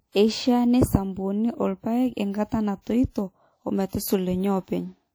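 Throughout the speech there is a ringing, washy texture with hiss that swells and fades with the signal, plainly audible and likely from WMA compression at a rate around 48 kbps, where long transform blocks smear quantisation noise over tens of milliseconds.

Pre-echo appears at 2.82 to 2.87 s, 3.10 to 3.16 s and 3.88 to 3.93 s. Each sharp onset is preceded by 43 to 59 ms of hiss because noise sized for the loud attack fills the block's quiet start, leaving the attacks soft and smeared.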